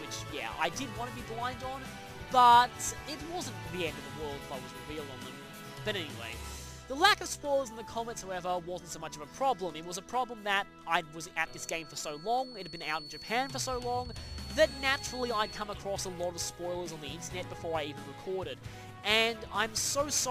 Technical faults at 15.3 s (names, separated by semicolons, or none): feedback whistle